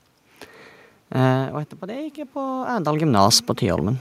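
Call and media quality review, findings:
Automatic gain rising, 1.79 to 2.98 s: speech and room noise swell together by about 4 dB over roughly 1.2 s. Probable component: capture-side AGC. Input level had fallen by about 15 dB, so the AGC ramped its gain up to compensate. Distinguishing sign: the background lifts in step with the speech. A talker moving off-mic, as heard around 1 s and again near 2.5 s, changes only the speech level while the room noise stays put.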